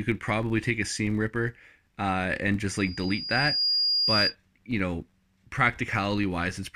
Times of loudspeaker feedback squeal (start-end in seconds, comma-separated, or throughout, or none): 2.73-4.35